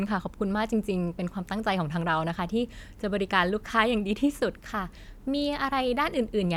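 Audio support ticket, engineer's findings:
No faults found on listening. Speech path carries through without audible defect.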